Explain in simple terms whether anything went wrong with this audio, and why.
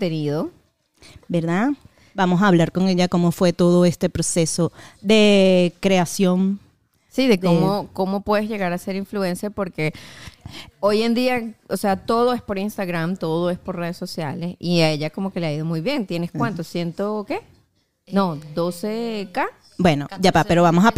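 Nothing went wrong here.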